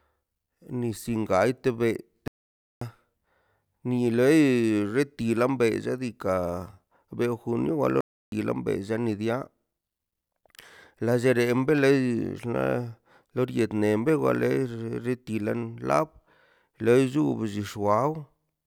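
The player likely ran short of data or had its output thread held up, so the speech drops to silence in mid-flow twice: a playback stall from 2.28 to 2.81 s, just after "gante bei", lasting about 0.54 s, and another from 8.01 to 8.32 s, about 0.32 s long. Each time the sound cuts out abruptly, hangs in a dead gap, and then resumes once the player catches up.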